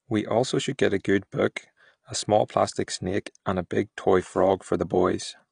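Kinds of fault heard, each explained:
AAC compression: throughout, nothing above 9.8 kHz and plainly audible dull, smeared coding damage, likely from low-bitrate AAC-LC around 32 kbps discarding upper bands and coarsely quantising what remains.
Pre-echo: 2.48 to 2.50 s, between "good book a small" and "plastic snake and a", a 20 ms hiss precedes the attack, because quantisation noise spread across the transform block leaks ahead.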